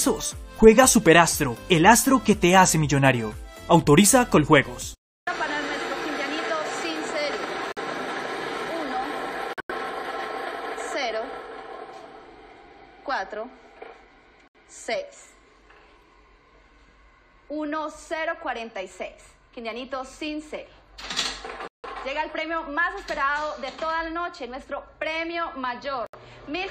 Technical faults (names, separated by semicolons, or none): corrupt frame muted